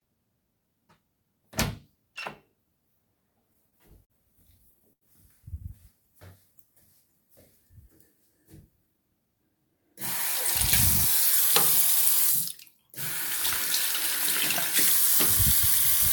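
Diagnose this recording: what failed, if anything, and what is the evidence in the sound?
Repeated stalls (stutter) in the network jitter buffer: four holds between 3.53 and 4.12 s, four more between 4.58 and 5.03 s, the longest 51 then 86 ms. Late packets emptied the buffer, so the last sound was stretched. Unlike dropouts, nothing goes missing; the audio drags.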